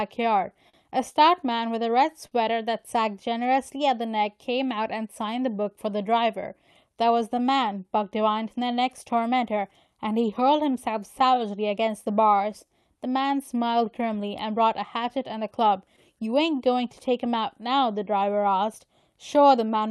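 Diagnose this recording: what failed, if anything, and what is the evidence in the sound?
The failure is at the network and jitter-buffer stage of a call path. The sender's audio clock runs roughly 3% slow relative to the receiver's, so the jitter buffer keeps draining. This clock drift between sender and receiver is heard as a speech tempo that never quite settles, with small timing hiccups recurring at uneven intervals across the whole clip. It is carried by an Opus-style call codec whose top end stops near 12 kHz.

The receiver answers the drift with repeated timing corrections from 0.22 s to 19.66 s. It repeatedly stretches short pieces of audio, always in the same direction, so playback runs at about 98% speed and gains about 0.4 s in total. Each edit is tiny, but together they give a faintly dragging, unsteady rhythm rather than any single obvious glitch.

Two short stalls from a late packet occur at 0.69–0.75 s and 2.27–2.33 s. 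In each, the buffer ran empty and the receiver held the last sound for 43 ms and 40 ms respectively until the packet arrived, then resumed exactly where it left off. Nothing is lost. The result is a briefly frozen sustain with a slight buzz or dip.

Scattered short gaps appear across two stretches. Between 5.15 and 8.99 s there are about seven late or lost packets, and between 14.69 and 19.50 s about ten. Each gap is no longer than roughly 10 ms and is patched by continuing the preceding sound, concealing around 1% of each span. They come through as brief ticks and smears without any missing content.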